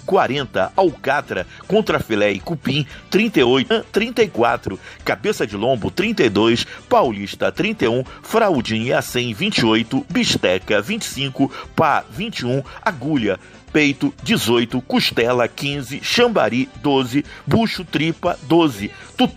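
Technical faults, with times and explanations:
3.69 s, stream segment skipped: the audio jumps abruptly ahead with a small blip, likely because one stream segment failed to load and playback continued from the next.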